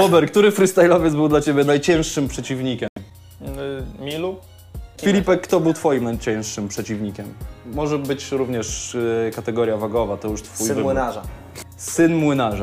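At 2.88 s the sound cuts out and stays silent until 2.98 s, a gap of about a tenth of a second. This is a Bluetooth dropout, likely caused by audio packets failing to reach the headphones in time and being discarded. When playback resumes, the material has moved on rather than picking up where it stopped, with roughly 85 ms of content skipped. That fits a handful of lost packets.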